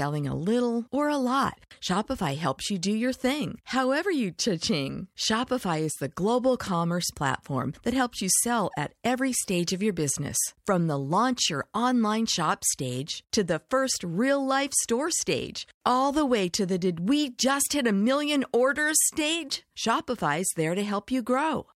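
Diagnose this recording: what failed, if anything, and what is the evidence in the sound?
Nothing in the speech points to a failure at any stage, from analogue wiring and conversion through to storage and playback, so there is no fault to diagnose.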